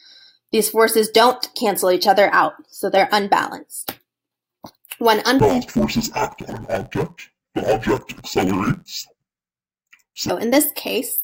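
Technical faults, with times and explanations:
5.40 to 10.30 s, interleaved audio read as planar: here the sound turns dull and robotic, with a buzz sitting at about 86 Hz. Something is taking blocks of alternating left-right samples and treating the first half as left and the second half as right, so each channel plays its samples at half speed. With blocks this short, about 11.6 ms, which fits a 512-sample block, you don't get a clean octave drop, just that block-rate buzz.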